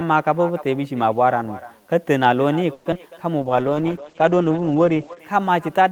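Echo with no canceller runs through the whole of this speech clip. Every phrase is trailed, around a third of a second later, by a copy about 17 dB quieter that sounds thinner. That is the talker's own audio returning after the far end's loudspeaker fed its microphone and nothing cancelled it before it went back through the network. A call audio freeze follows from 2.73 to 2.87 s. The sound stalls and the last moment is stretched into a fading buzz for about 120 ms, with no true silence. Speech then resumes exactly where it stopped, so nothing is lost but a pause has been inserted. The likely cause is delayed packets emptying the jitter buffer while the receiver waited. Short concealed packet loss at 2.91 to 2.94 s gives a brief smear. The receiver papers over a 30 ms hole by extending the preceding sound, but most of that span is simply gone rather than filled. A skip ahead at 2.94 to 2.97 s then drops around 70 ms of audio and splices the two sides almost directly. 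The stretch was lost on the way or discarded by an overflowing jitter buffer while later audio was already waiting. A jitter buffer slow-down from 3.38 to 3.76 s plays the speech at about 86 percent speed without changing pitch. Repeated pitch periods add 59 ms and draw out the sounds, as the receiver rebuilds its reserve. A call bitrate drop from 3.42 to 5.25 s turns the speech rough and muffled, with the top end cut off at 8 kHz instead of the full 20 kHz. For most of that span, roughly 1.7 s, the coarse, band-limited coding fits the encoder falling from around 32 kbps to 10 kbps after the bandwidth estimate collapsed.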